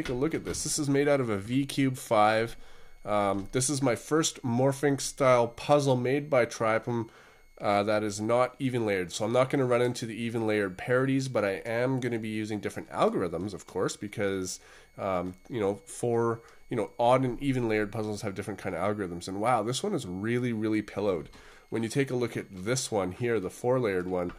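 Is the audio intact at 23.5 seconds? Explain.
No. A switching supply whistle runs through the whole clip, including 23.5 s: a power supply cycling in an audible burst mode or beating with another leaks a thin high tone between about 2.1 and 2.3 kHz, roughly 40 dB below the sound.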